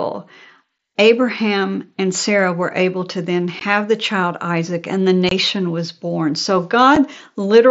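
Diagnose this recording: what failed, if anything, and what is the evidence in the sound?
Unconcealed Bluetooth headset packet loss on the wireless link. Sharp speech gaps at 0.78, 3.60, 5.29 to 5.32 and 6.96 s fit lost 7.5 ms packets filled with silence.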